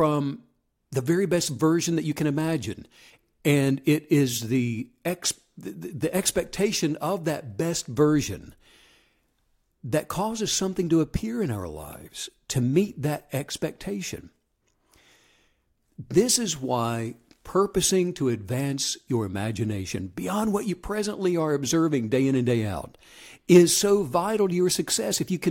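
No audible technical faults here.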